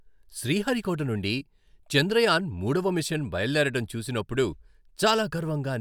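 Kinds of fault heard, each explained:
No faults detected in the speech recording; nothing in the signal points to a processing or transmission problem.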